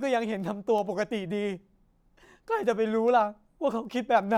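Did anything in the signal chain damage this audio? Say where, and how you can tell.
Yes. The digital link into the converter stage has word clock ticks: sharp ticks of uneven strength, roughly every 0.4 s from 0.40 s to 4.23 s, about ten in all. The receiver isn't locked to the sender's clock, about 70 ppm off, so each time they slip a sample gets dropped or repeated.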